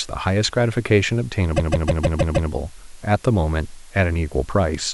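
From the start, the speech has been reduced to very few bits with dither added before rounding, a low bit depth with dither, which fits an 8-bit signal. The rounding error becomes a constant, even hiss roughly 30 dB below the speech, with no distortion.

From 1.56 to 2.50 s, repeated frames occur: a short block of about 157 ms of compressed audio is played again several times, which points to six duplicated frames. This stutters the speech and adds about 0.94 s.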